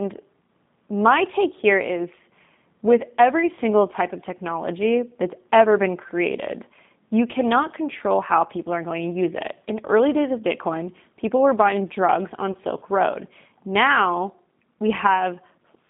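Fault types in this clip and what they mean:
G.729 codec: A low-rate VoIP speech codec that models the signal as a vocal tract filter driven by a pitch predictor and a few pulses per subframe, so the waveform is resynthesized rather than preserved. The sound fits the 8 kbit/s G.729A variant, passing roughly 150 Hz to 3.7 kHz throughout. Nothing reaches the upper band, and the coding damage is plainly audible as a rough, slightly synthetic texture across the whole clip.
VoIP packet loss concealed by the speech codec: When a packet fails to arrive, the decoder fills the gap by extending its last pitch and filter state at falling gain, then rebuilds from that altered state once data resumes. Here about 20 ms of audio is lost, which fits a single missing packet. The disturbance runs from 12.52 to 12.56 s as a brief stretched, fading sound, with the speech sounding weaker and distorted for a short moment after real data returns.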